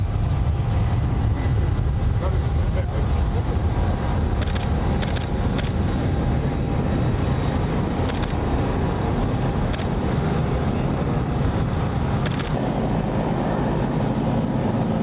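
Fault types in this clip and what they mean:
Gain pumping: The level rises and falls throughout, by roughly 5 dB. Loud and soft passages sit closer together than they should, so the sound feels squashed. The likely cause is input gain set far too high, with a fast limiter or compressor clamping down on every peak. The narrow call bandwidth ends near 4 kHz.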